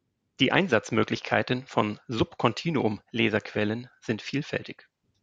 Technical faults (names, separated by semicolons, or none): none